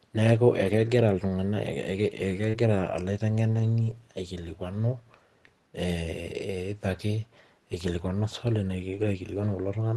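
From 0.63 to 0.77 s the speech turns briefly rough and noisy without any break. This is a lost packet rebuilt from error correction. About 80 ms went missing, which points to roughly four packets, and the decoder played the low-bitrate copies carried in the following packets. The same grainy patch recurs at 2.53 to 2.55 s (20 ms), 3.55 to 3.69 s (80 ms) and 8.93 to 9.03 s (60 ms). What sets these apart from concealment is that the real speech continues, only coarser, rather than being guessed.

At 2.49 to 2.55 s there is a short concealed packet loss. About 40 ms never arrived in time, and 36 ms of it was filled by extending the preceding sound before blending back, just as the rebuilt frame at 2.53 s takes over. Here the sound smears or wobbles instead of roughening, because the decoder is continuing what came before, not playing a degraded copy of the missing audio. The Opus call path at 24 kbps limits the band to about 12 kHz.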